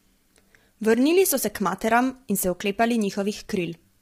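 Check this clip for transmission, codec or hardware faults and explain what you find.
There is one fault, and it runs through the whole speech clip. Low-delay AAC compression, present from start to finish: the coding is likely AAC-ELD, the video-call codec, with damage heavy enough to fit roughly 24 kbps. At this low bitrate its coarse quantization of the spectrum leaves too few bits for the voice, so the voice sounds rough and grainy, with noise filling the gaps between harmonics and a dulled or synthetic-sounding top band.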